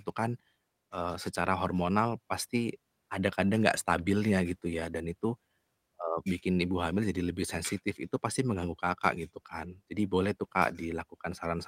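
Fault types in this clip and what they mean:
Clock drift between sender and receiver: the sending clock runs roughly 1.5% slow, so the receiver's buffer keeps draining and must be topped up throughout the speech. Unlike random network jitter, the mismatch always pushes the same way and never settles.
Repeated timing corrections: from 0.2 to 11.48 s, short pieces are repeated to fill the shortfall, slowing delivery to 98% and adding about a fifth of a second. Pitch stays put, unlike a resampling error, and the edits come as small, unevenly spaced hiccups.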